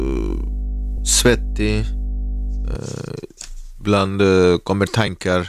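A ground loop or nearby transformer is feeding the 50 Hz power line into this speech recording from the start to about 2.76 s, putting a steady low hum under the voice that sits only a few decibels below it. Lost LE Audio frames also occur at 0.97 s and 5.07 s, each gap matching a single 10 ms frame. The decoder, likely LC3 at light compression, covers each loss by reusing the previous spectrum with scrambled phase, leaving a brief noisy smear in place of the speech.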